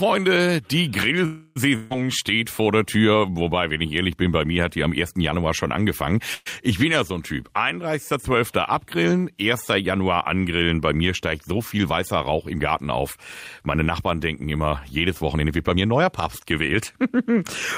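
At 1.25 to 1.58 s and again at 6.34 to 6.48 s, after "schon angefangen", a call audio freeze holds the last sound as a fading buzz or hiss, likely from delayed packets. Speech resumes intact, only later. The second includes a brief 10 ms silence.

A burst of packet loss at 1.76 to 1.92 s, just before "steht vor der", sounds similar, but about 140 ms of speech is genuinely skipped.

Jitter buffer speed-up hurries the speech at an unchanged pitch: 7% faster at 11.21 to 11.86 s and 12.32 to 13.03 s, and 14% faster at 14.96 to 16.58 s after "denken immer".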